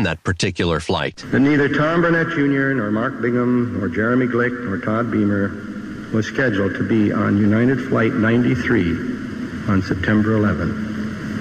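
No technical faults can be heard anywhere in the audio, and the signal holds steady in level and continuity throughout.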